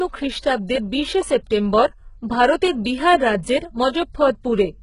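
A speech recording with heavy codec damage throughout, most likely from HE-AAC compression at a very low bitrate, consistent with roughly 12 kbps. Nothing is present above 11 kHz, and the upper band that remains is synthesised rather than coded. Spectral band replication copies the lower spectrum upward under a coarse envelope, so the treble keeps some brightness, but its harmonics do not line up with those below the crossover. The result is s sounds and other high-frequency detail that sound gritty, metallic or lisping. A short pre-echo also occurs from 0.39 to 0.43 s, a spread of about 39 ms just before "বিশে সেপ্টেম্বর ভারতের বিহার". The onset falls late in a transform block, and quantisation noise sized for the louder portion spills into the quiet gap ahead of it. That produces a brief hiss before the attack and blunts its edge.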